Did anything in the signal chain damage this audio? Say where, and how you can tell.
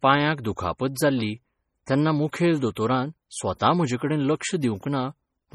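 Yes, at the codec stage. Heavy MP3 compression is the likely cause: the whole speech clip has the watery, swirling texture of a transform codec starved of bits, with weak spectral lines dropping in and out from frame to frame and s sounds turning metallic and chirpy. Content stops near 20.9 kHz, and the overall damage fits an encode at around 32 kbps, where the hearing model discards much of the detail.

The same codec also produces pre-echo, heard at 1.86 s, 2.32 s and 2.75 s. Each time a sharp speech onset lands late in a transform block, the quantisation noise sized for that loud attack is spread back across the quiet moment before it. The result is a short hiss of roughly 13 to 16 ms ahead of each onset, and the attack itself sounds softened and smeared.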